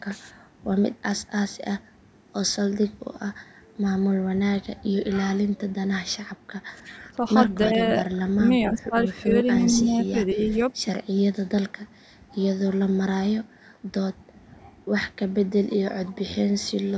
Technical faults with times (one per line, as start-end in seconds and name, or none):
6.83-7.21 speech suppressed in double talk
7.63-7.68 echo leak
7.68-10.60 speech suppressed in double talk